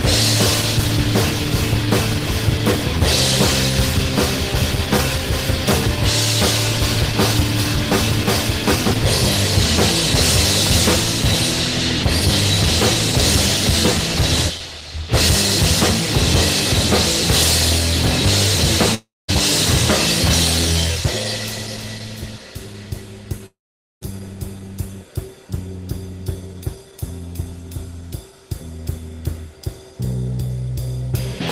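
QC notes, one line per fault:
18.95–19.30 s and 23.46–24.13 s, long network dropout: the likely cause is audio packets failing to arrive for about 340 ms and then 560 ms, so the receiver filled each gap by extending the last sound. That fill is a buzz or hiss that fades, giving way to about 200 ms and then 470 ms of near silence before the audio resumes further on with the lost portion simply absent.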